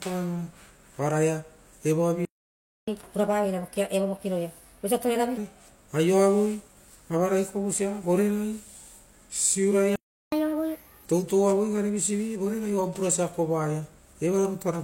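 At 2.25 s the speech cuts out mid-flow and the output goes completely silent until 2.88 s, a playback stall of about 0.62 s. This was likely caused by the player running out of buffered data or its thread being blocked. On a waveform this is a flat line; on a spectrogram, a clean empty vertical band across all frequencies with abrupt edges on both sides.

From 2.88 to 5.37 s the player catches up at higher speed, resampling its backlog at 1.25 times normal rate. Speech runs fast and rises by about four semitones, giving a brisk, chipmunk-leaning tone before returning to normal. On a spectrogram the harmonic stack sits visibly higher and more widely spaced, and syllables are squeezed closer together in time.

The pattern repeats. A second playback stall silences the audio from 9.96 to 10.32 s, about 0.37 s, likely from the same buffer underrun or blocked thread, and it shows as another flat, empty gap.

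Catch-up at higher speed follows from 10.32 to 11.05 s, this time at 1.5 times speed and roughly seven semitones up. The acceleration and pitch lift are more extreme but brief, and the harmonics jump noticeably higher before dropping to normal.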